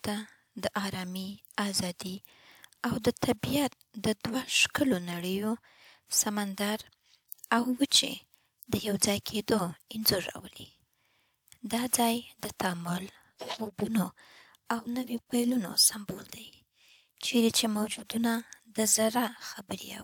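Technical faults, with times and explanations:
No technical faults can be heard anywhere in the recording, and the signal stays steady and continuous throughout.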